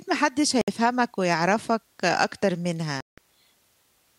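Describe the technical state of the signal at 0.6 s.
Around 0.61 to 0.68 s the speech cuts out for about 64 ms, most likely a Bluetooth dropout: late packets never reach the headphones, so output falls silent, a gap fitting roughly three lost packets. The waveform shows a flat hole; the spectrogram, a blank vertical band.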